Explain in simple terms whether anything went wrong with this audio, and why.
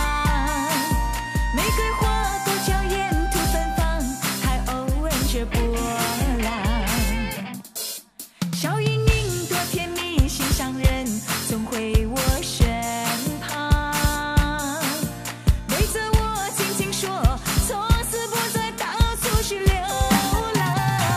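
A faint, steady whine at 1 kHz runs from 3.54 to 5.54 s. This USB whine comes from the USB connection's power pulsing every millisecond and leaking into the sound.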